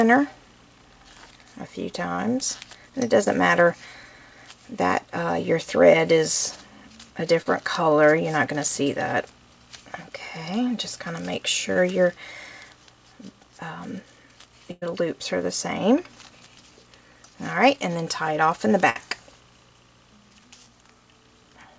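Short concealed packet losses at 2.16, 3.24, 7.42 and 11.73 s each leave a 20 to 40 ms hole patched from the preceding sound: a brief smear or wobble. A burst of packet loss at 14.71 to 14.84 s loses about 100 ms, which is held as a buzz or hiss that fades to a trace of silence before the sound resumes further on. A second burst at 18.90 to 18.97 s drops 60 ms. These bursts differ from the short losses because the gap is longer and the decay is audible. Throughout, the band stops at 8 kHz, which fits a wideband call codec.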